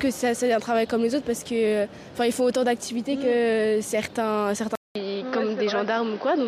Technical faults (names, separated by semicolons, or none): input switched to a poorer device